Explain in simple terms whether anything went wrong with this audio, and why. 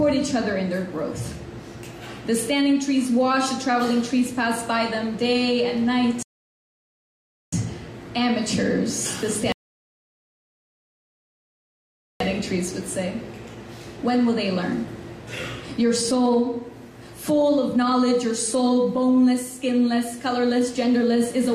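Rebuffering stalls at 6.23 to 7.53 s and 9.52 to 12.20 s: playback ran out of downloaded audio, fell silent for 1.3 and 2.7 s, then resumed exactly where it stopped.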